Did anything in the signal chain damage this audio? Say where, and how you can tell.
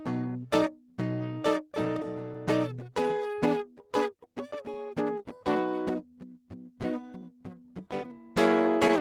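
Yes. The damage is at the receiving buffer: clock drift between sender and receiver, with the sender's clock running roughly 3 percent slow, so the jitter buffer keeps draining. All through the music, small timing hiccups recur at uneven, unpredictable intervals rather than on a steady beat.

Repeated timing corrections run from 0.28 s to 8.08 s. To keep its buffer from running empty, the receiver repeatedly inserts short repeated pieces, playing the music at 98 percent speed and stretching it by around a fifth of a second.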